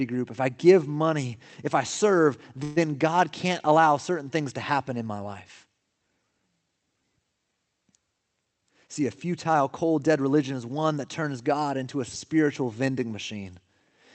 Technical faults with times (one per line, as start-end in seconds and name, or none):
2.63-2.78 call audio freeze
8.45-10.29 jitter buffer speed-up